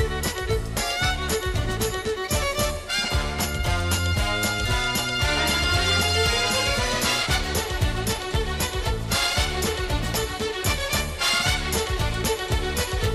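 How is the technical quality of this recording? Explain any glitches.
The recording has two glitches, both a repeated buffer. At 3.07 s and 8.16 s, new audio arrived late, so the last short block, fitting a 10 ms buffer, replayed once. Each repeat gives a hard-edged click or brief buzz.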